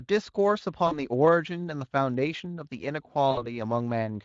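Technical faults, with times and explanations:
0.87 s and 3.31 s: VoIP packet loss concealed by the speech codec. Around 0.87 s about 40 ms of audio goes missing, and around 3.31 s about 60 ms. In each gap the decoder keeps repeating its last pitch and spectral shape while turning the gain down, so the sound smears into a short buzzy, fading tone, with some weakness lingering until about 1.0 s and 3.47 s. On a spectrogram the harmonics run flat and steady, then dim, and the waveform envelope tapers.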